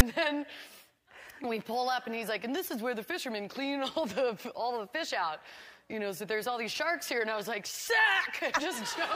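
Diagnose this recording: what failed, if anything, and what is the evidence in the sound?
The player's file parsing failed: a block of text tags at the head of the file was decoded as audio samples, a storage and playback fault known as file tags played as audio. At 0.0 s a brief, hard-edged rasp sits offset to one side before the real audio begins.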